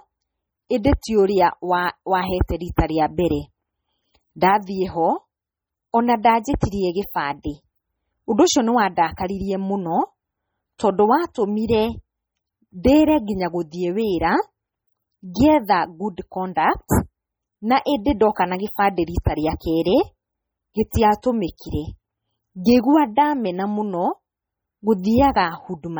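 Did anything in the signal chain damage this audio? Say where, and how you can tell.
Yes, at the codec stage. Across the whole speech clip the high band sounds watery and swirly, with metallic chirps on s sounds. This is likely MP3 compression under heavy bit starvation, with damage that points to a very low bitrate of about 32 kbps. On a spectrogram there are isolated high-frequency patches flickering on and off from frame to frame.

There is also pre-echo at 20.90 s, where a short hiss spreads about 20 ms ahead of a sharp attack and softens its onset. The transform codec spread quantisation noise sized for the loud attack across the whole block, so it also filled the quiet gap just before it. On the waveform the silence before the transient shows a noise envelope. On the spectrogram there is a broadband smear leading into the attack instead of a clean vertical edge.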